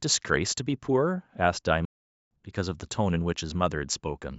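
At 1.85 s the speech cuts out mid-flow and stays silent for about 0.46 s, resuming at 2.31 s. This is a playback stall: the sound stops dead rather than fading or smearing, and the gap is pure silence. The likely cause is that the player ran short of data or its thread was held up. Unlike a brief dropout or concealed packet loss, the break is long and clean, with no buzzy filler or repeated fragments.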